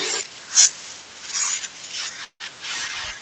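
At 2.24 s the speech stalls for about 0.18 s, until 2.42 s. What you hear is the last bit of sound smeared on as a fading buzz or hiss that drops to silence for roughly the final 80 ms. That's a call audio freeze, likely from packets held up in transit so the jitter buffer ran dry. Nothing is lost, though. The speech picks up right where it stopped, just about 0.16 s later, with the call path's top end already rolled off above 8 kHz.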